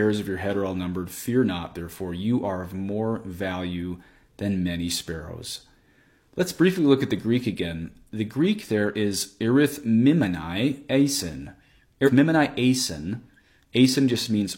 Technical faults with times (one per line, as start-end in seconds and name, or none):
12.03-12.10 compressed frames skipped